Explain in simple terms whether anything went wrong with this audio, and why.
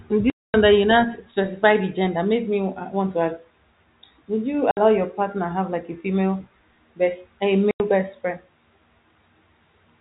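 Packet loss filled with silence at 0.3–0.54 s, 4.71–4.77 s and 7.71–7.8 s: chunks of the speech were lost in transit and replaced by abrupt gaps, lengths that fit 30 ms packets.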